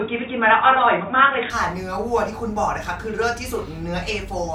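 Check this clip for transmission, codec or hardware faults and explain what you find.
One fault is present, at the start of the clip. From 0.0 to 1.5 s the speech is band-limited, with nothing above 3.8 kHz, so it sounds dull and boxy. It also sits a few decibels apart in level from the rest, with a faint noise floor well below the speech. At 1.5 s the full bandwidth returns with no gap. This pattern points to an input switched to a poorer device, likely a narrower-band microphone or headset call profile used at the start before the system moved to the main input.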